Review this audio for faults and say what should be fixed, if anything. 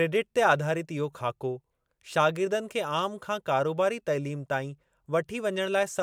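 No faults can be heard anywhere in this speech recording. Nothing needs to be fixed.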